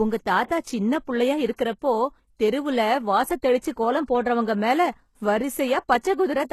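From start to finish there's plainly audible damage that's likely HE-AAC compression: synthesised treble with gritty, lispy s sounds, nothing above 12.3 kHz, fitting a bitrate around 16 kbps. At 3.58 to 3.63 s there's pre-echo: block-wide quantisation noise smears about 53 ms of hiss ahead of an attack, softening it.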